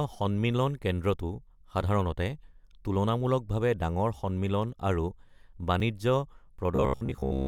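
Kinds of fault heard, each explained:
Overlap between stream segments: Two chunks of the stream claim the same stretch of time, so the player trims the overlap, dropping about 17 milliseconds of sound and making the waveform jump. Here it's a single tiny click or skip at 5.80 s, consistent with 2-second segments.
Robotic sound from repeated short buffers: From 6.76 s to the end the speech turns into a stiff, metallic buzz at about 66.7 Hz that only loosely tracks the talking. It's likely caused by audio arriving too slowly and a slice of roughly 15 ms being looped to fill the gaps, so most of that stretch is repeats rather than real signal.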